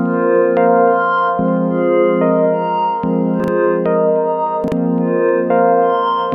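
Two brief garbled, jumbled moments break the flow of the audio, at 3.40 to 3.48 s and again at 4.64 to 4.72 s. These are chunks out of order: a 40 ms chunk of audio arrived one chunk late and plays after its successor, so nothing is missing but the sequence is swapped, leaving three hard joins.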